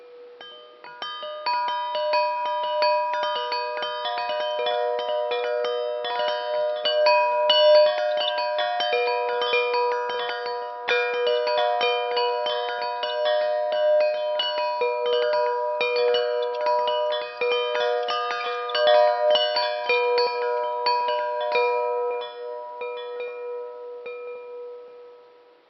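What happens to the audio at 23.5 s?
Nothing goes wrong at 23.5 s; the audio plays through that moment intact, with no dropout, click, distortion or other fault.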